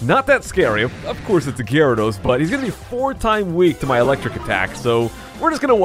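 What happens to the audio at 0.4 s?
At 0.4 s the audio runs on intact, with no dropout, click or other fault to be heard at that point.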